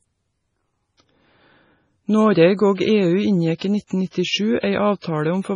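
Throughout the speech, nothing is present above 10.4 kHz, and weak detail flickers in and out, giving a watery, swirly texture with metallic edges on s sounds. This points to heavy MP3 compression, likely at a very low bitrate around 24 kbps, where the encoder drops treble and zeroes quiet frequency lines.

Pre-echo appears at 3.58, 3.87, 4.10, 4.60 and 4.99 s. Each time, a short hiss leads the attack by 30 to 46 ms and the onset sounds smeared. The codec spreads the noise meant for the loud attack across its whole block, including the quiet moment before it.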